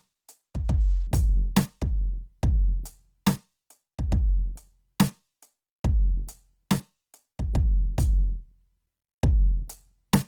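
Throughout the music, tones sound noisy, rough and grainy: plainly audible Opus compression damage, likely from its CELT mode at a rate fitting 16 kbps. Starved bands get refilled by folding lower bands or with noise, while content still extends to 20.4 kHz.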